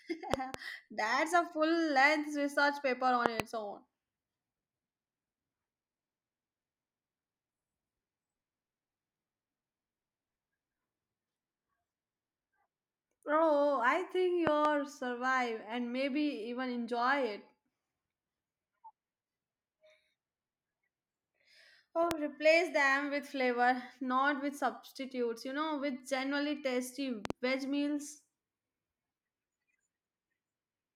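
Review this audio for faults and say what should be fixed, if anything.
Loud pops, heard as double pops at 0.34–0.56 s, 3.26–3.42 s, 14.47–14.67 s and 27.25–27.32 s, and as a single pop at 22.11–22.13 s. They peak about 15 to 25 dB above the speech, which continues underneath. The likely cause is a sudden voltage step from a connector, switch, static or driver glitch. Secure and ground all cabling, and avoid plugging or switching anything while recording.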